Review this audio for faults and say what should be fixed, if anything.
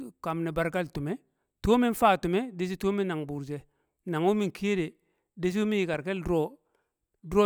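CD scratch ticks: five ticks between 5.94 and 6.84 s, just after "dishi wu mi", recurring about five times a second as the disc turns, the longest lasting about 1.5 ms, where the player patched over unreadable samples. On a spectrogram they appear as thin evenly spaced vertical broadband lines, and on the waveform as tiny flattened or notched spots in the speech. To prevent this, re-rip from a clean or resurfaced disc using a secure-ripping tool that re-reads damaged sectors.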